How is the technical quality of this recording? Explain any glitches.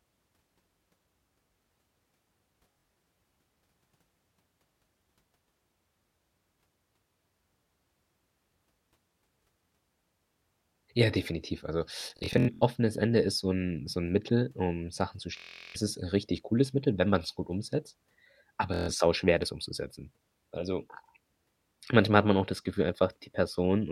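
The speech breaks up four times with Bluetooth stutter, at 2.72 to 2.95 s, 12.01 to 12.63 s, 15.37 to 15.76 s just before "ist 'n richtig cooles", and 18.74 to 18.90 s just before "sauschwer das umzusetzen". Each is a brief buzzing, machine-gun repetition, longest around 12.0 s, where roughly 350 ms goes missing. Late or lost wireless packets made the receiver replay its last short buffer until fresh audio arrived.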